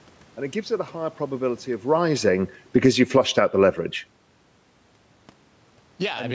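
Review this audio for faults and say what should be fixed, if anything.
Just after "a higher probability of", the speech and its room background sink together from 1.87 s to 3.4 s, about 8 dB quieter. This is automatic gain falling: the call's gain control judged the input too loud and lowered its gain gradually, likely reacting to the talker moving at around 1.5 s.

From 3.08 s to 3.89 s, voice and background swell back up together by about 4 dB. This is automatic gain rising: after the input dropped by about 18 dB, the gain control raised its gain over most of a second, chasing that level change rather than holding steady.

To prevent this, slow the gain control's attack and release and widen its target window so that ordinary changes in talker distance don't trigger gain corrections.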